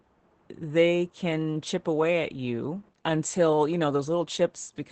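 Opus voice compression runs through the whole speech clip: the SILK coder's wideband mode leaves nothing above about 8.7 kHz, and coarse excitation coding makes the voice plainly muffled, hoarse and slightly robotic, which points to a bitrate near 12 kbps.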